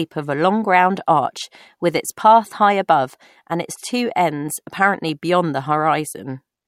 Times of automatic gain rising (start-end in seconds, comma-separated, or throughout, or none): none